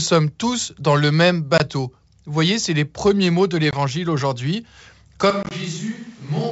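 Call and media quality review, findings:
Packet loss on the ADPCM call. Hard-edged silent gaps of 20 ms each at 1.58 s and 3.71 s, about two packets' worth. Third hit at 5.43 to 5.52 s: 50 ms lost, scattered over about 80 ms, runs up to 20 ms, roughly five packets. Component: network path into the ADPCM decoder. Mechanism: concealment by silence desyncs the decoder's adaptive predictor and step size. Speech resumes at the wrong level, or with a click and some distortion, and settles within tens of milliseconds.

Switch to a distant microphone, likely cause. From 5.31 s to the end. Sudden change to a roomy, hollow sound with thinner bass. Level down about 5 dB. Room noise rises to about 25 dB below speech. Component: capture path. Mechanism: the close mic signal drops out and a far pickup, such as a camera mic, takes over. The 5.43 s loss burst falls inside this stretch. The G.722 wideband path at 64 kbit/s shows faint codec damage at most.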